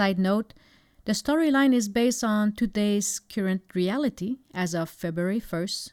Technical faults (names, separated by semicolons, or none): none